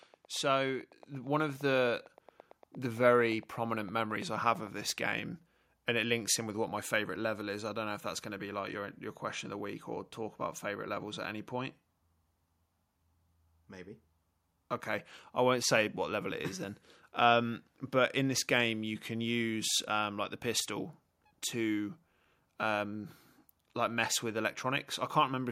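A speech recording whose signal path was likely hit by interference from nearby equipment or a faulty connection or power supply, injecting a train of clicks from 0.03 to 5.02 s. These are regular ticks at 8.8 per second, about as loud as the speech itself. The call software also stepped up the microphone volume at 1.02 s, so voice and background jump together by about 4 dB.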